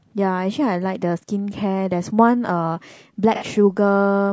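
From start to finish the speech sounds rough and grainy. Noise sits between the harmonics, and the top band sounds thin and synthetic. Low-delay AAC compression is the likely cause. Its short frames resolve pitch poorly, and the damage fits a bitrate near 32 kbps.

At 3.35 s comes AAC frame loss with concealment. The decoder lost a couple of frames and rebuilt them from the last good spectrum. Until 3.44 s the sound turns smeared, noisy and phasey before normal decoding returns.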